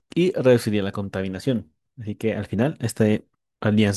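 No dropouts, clicks, distortion or other technical faults turn up anywhere in the speech.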